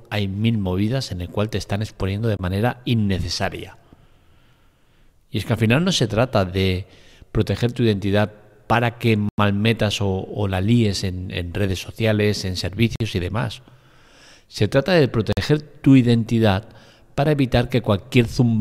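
Speech with a block of digital silence at 2.37 s (23 ms), 9.29 s (93 ms), and 12.96 s and 15.33 s (46 ms each). Hard cuts rather than fades, with lengths fitting 1024 to 4096 samples, point to output buffer underruns.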